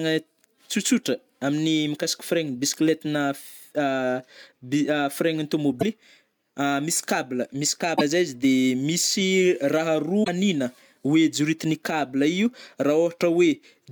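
Speech with three brief glitches at 5.76 to 5.83 s, 7.93 to 8.01 s and 10.20 to 10.28 s. Each is damaged data in a compressed stream, where the decoder misreads corrupted frames and loses sync until it finds the next frame.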